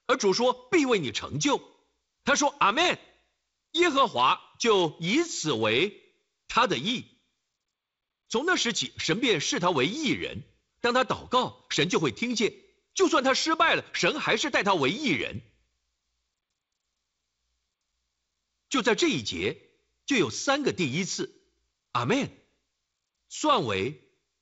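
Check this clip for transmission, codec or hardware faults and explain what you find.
No transmission, codec or hardware faults.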